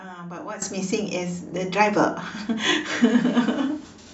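At 0.62 s there's a sudden gain jump of about 12 dB that holds to the end, speech and background rising together, likely an unramped gain change.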